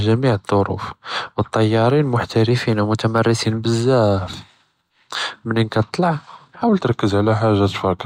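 Speech that abruptly speeds up and rises about a semitone (105 cents, 6.2% faster) from 2.51 to 3.45 s, then slows and drops about 111 cents (6.2% slower) from 6.69 s to the end; a drift correction step, likely clock-matching software stepping the playback rate.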